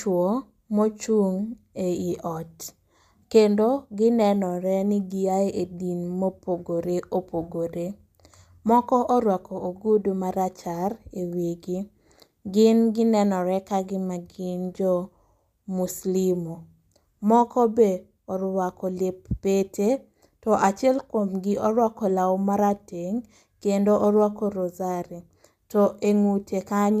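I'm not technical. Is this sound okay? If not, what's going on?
Yes, nothing wrong can be heard in this recording.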